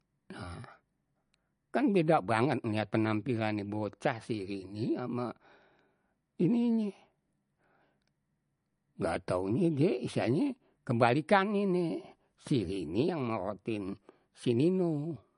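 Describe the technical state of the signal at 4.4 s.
At 4.4 s the speech has the dull, band-limited sound of low-bitrate audio saved at a high bitrate, a condition that runs through the whole clip. A spectrogram shows a hard ceiling with nothing above 10.6 kHz and smeared, patchy detail below it. The waveform looks ordinary. The likely cause is an MP3 first encoded at a low rate, around 40 kbit/s, then re-encoded at a high rate, which could not restore the discarded content.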